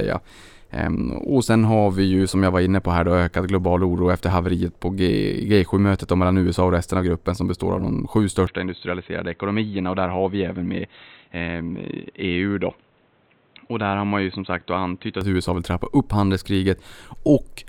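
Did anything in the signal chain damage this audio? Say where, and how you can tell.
Yes. From 8.47 s, straight after "består av de sju", the speech turns dull and boxy with no gap at the switch. Everything above 4.1 kHz vanishes, the level drops by roughly 5 dB, and a new noise floor appears, sitting low beneath the speech. Full bandwidth returns at 15.21 s. This is at the capture stage: the input likely switched to a poorer device, a narrower-band microphone with its own gain and self-noise, and then switched back.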